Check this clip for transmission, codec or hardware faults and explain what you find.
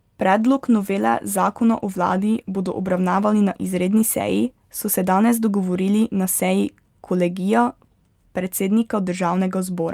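One transmission fault stands out: a call bitrate drop across the speech from 0.39 s to 6.13 s. The speech turns rough and watery, and the upper frequencies thin out into a muffled tone, worst for a stretch of about 2.4 s before clarity returns. The degradation fits the encoder being pushed from roughly 64 kbps down to around 20 kbps after the call's bandwidth estimate fell. With so few bits, Opus quantises coarsely and trims the high band until the rate recovers.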